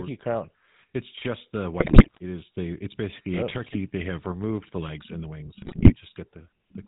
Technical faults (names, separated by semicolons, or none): GSM full-rate codec; GSM bit errors